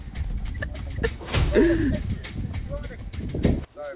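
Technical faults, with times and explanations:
Throughout, aliasing: the audio was reduced to a lower sample rate with no anti-alias filter first, so everything above about 4 kHz folds back downward into the band as tones that do not belong to the sound, roughly 20 dB below it. The sound points to a drop from 48 kHz to 8 kHz. Unlike a clean low-pass band limit, which simply sounds dull, the spectrum stays full right up to 4 kHz and sibilance turns gritty and metallic.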